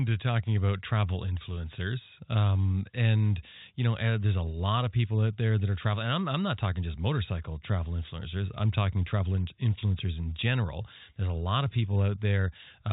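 Bit errors on a digital phone line appear at 6.64 s, just after "I'm I'm not": flipped bits in the telephone-coded samples, around a tenth of a percent, change individual samples in the narrowband speech. At 7.15 s, right before "travel influencers I'm talking", comes a single bit error spike. The values of two samples jump by a power of two and snap straight back, giving one isolated, full-band click that is unrelated to the signal rather than part of a scattered crackle.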